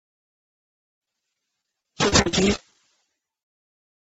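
From 0.60 s to 2.75 s there is repeated packet loss, giving a robotic sound: a dense run of short gaps, the longest about 40 ms, each patched by extending the preceding audio. Roughly 350 ms is concealed this way, producing choppy texture above a band-limited 8 kHz ceiling.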